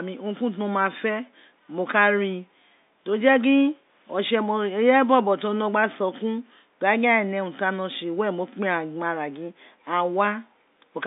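Nothing stood out on listening to this speech recording.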